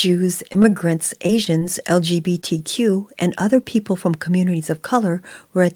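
From 0.49 to 1.63 s the speech breaks up with repeated packet loss, giving a robotic sound. Packets go missing again and again across this stretch. Each time, the receiver covers the hole by extending the sound just before it. The holes are short, the longest about 25 ms. About 131 ms is patched in this way, and about 80 ms of real audio is gone. The speech turns choppy and robotic, with small pieces dropped.

At 2.41 to 2.45 s there is a short stall from a late packet. The next packet arrives about 17 ms behind schedule. The jitter buffer runs dry for that moment. The receiver holds the last sound for about 17 ms until the packet turns up. Playback then resumes where it left off. Nothing is lost. One sound is simply held a touch too long, with a faint buzz or dip.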